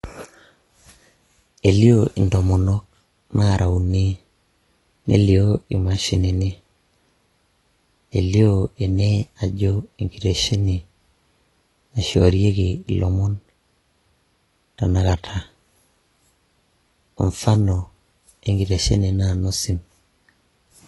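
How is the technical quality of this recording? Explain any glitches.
The recording carries plainly audible codec damage throughout. The likely cause is AAC compression at a low bitrate, consistent with about 32 kbps: nothing survives above 11.5 kHz, leaving the speech dull, smeared and warbling.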